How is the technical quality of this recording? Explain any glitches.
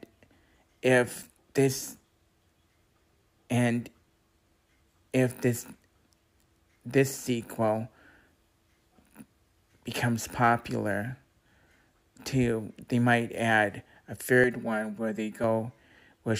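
There's one glitch, a short stretch of channel delay (comb filtering). From 14.44 to 15.44 s, one side lags by about 5 ms, and mono summing cancels evenly spaced notches from around 100 Hz up, leaving it hollow and phasey.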